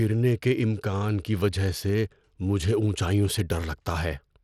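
From start to finish, the speech has been squeezed through Bluetooth SBC compression, likely with a small bit pool that fits roughly 96 kbps. The starved upper sub-bands leave nothing above 17.2 kHz, the treble sounds thin, and gritty quantisation noise and aliasing ride on the speech.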